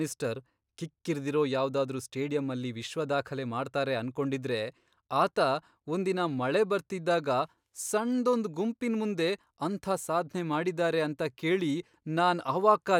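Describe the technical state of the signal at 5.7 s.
At 5.7 s the speech signal is intact, with no audible fault at that moment.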